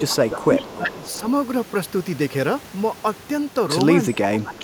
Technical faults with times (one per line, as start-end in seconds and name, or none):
0.00-1.26 speech suppressed in double talk
0.08-0.15 echo leak
0.41-0.77 echo leak
1.04-1.20 echo leak
4.11-4.58 speech suppressed in double talk
4.58-4.63 echo leak